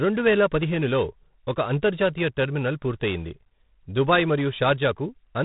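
Throughout, the speech carries G.726 ADPCM damage at 24 kbit/s: coarse adaptive difference coding adds harsh rasping hiss tracking level, and the spectrogram shows nothing above 3.8 kHz.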